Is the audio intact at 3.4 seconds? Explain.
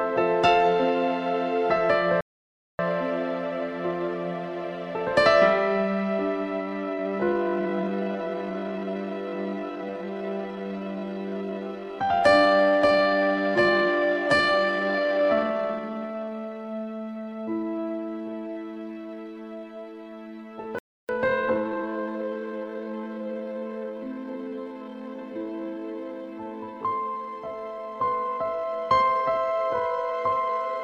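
Yes, the audio is intact at 3.4 seconds, with no fault present at that moment.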